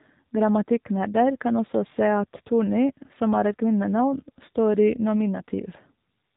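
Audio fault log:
throughout AMR narrowband mobile codec: the speech stops dead above 3.8 kHz and carries a plainly audible buzzy, synthetic edge, because each 20 ms frame is rebuilt from a vocal-tract model excited by sparse pulses; the coarseness fits a low rate near 7.4 kbps.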